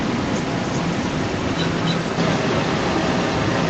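From the start at 0 s to the end at 3.70 s, the speech returns about 285 ms later as a second copy at roughly the same loudness as the speech. This is an echo leak, likely from a far end on loudspeaker whose echo canceller let its microphone pickup travel back. Reverberation would blur into a smooth tail. Here the echo is a distinct, separated repeat, band-limited like the call audio to nothing above 8 kHz.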